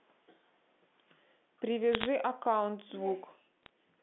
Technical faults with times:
1.93-2.06 bit errors on a digital phone line
3.63-3.69 bit errors on a digital phone line

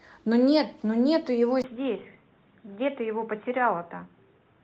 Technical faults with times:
1.62-4.64 input switched to a poorer device

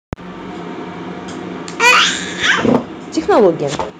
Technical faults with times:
0.12-0.52 microphone overload
1.84-2.02 microphone overload
2.65-2.76 microphone overload
2.76 microphone volume stepped down
3.30-3.47 microphone overload
3.90 microphone volume stepped down

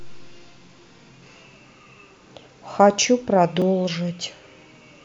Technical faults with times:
3.62 block of digital silence

